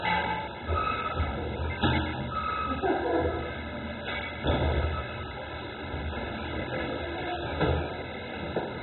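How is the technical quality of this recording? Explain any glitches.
Poor quality throughout. The sound is dull and gurgling, with nothing above 4 kHz. The likely cause is MP2 compression at a very low bitrate, around 16 kbps, which switches off upper sub-bands and coarsely quantises the rest.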